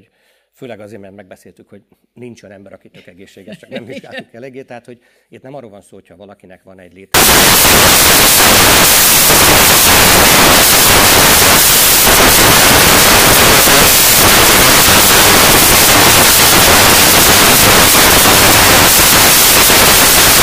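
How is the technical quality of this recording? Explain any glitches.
The recording is badly damaged from 7.14 s to the end at 20.42 s, where it turns to noise. Samples built from the wrong bytes: the reader misassembles each sample's bytes, so fast-changing low bits become the large part of each value, producing loud, harsh broadband noise, close to white on loud sounds.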